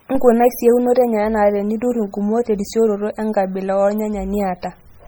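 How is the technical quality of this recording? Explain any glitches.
Poor, with heavy compression damage throughout. MP3 compression, likely, from start to finish: the encoder zeroes weak frequency lines that flicker between frames, so the speech sounds watery and swirly, which fits a low bitrate near 32 kbps.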